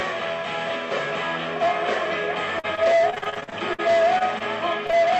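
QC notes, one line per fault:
2.59–3.80 s, repeated packet loss (robotic sound): 13 separate gaps within this stretch, the longest 49 ms. About 260 ms of audio never arrived, and 338 ms was synthesised by extending the preceding sound, which is 28% of the span. The rapid alternation of real and patched audio gives the choppy, robotic texture.
4.18–4.23 s and 4.39–4.42 s, short stall from a late packet: on both occasions a packet arrived late and the jitter buffer ran dry. The last sound was held for 22 ms and then 19 ms until the packet arrived, and playback resumed from the same point. Nothing is lost; the sound is audibly stretched.
4.86–4.91 s and 4.91–4.94 s, short concealed packet loss: two consecutive losses of 20 ms each. The decoder bridged them with 24 ms and 16 ms of continued sound before blending back into the real signal, heard as a brief smear across that point.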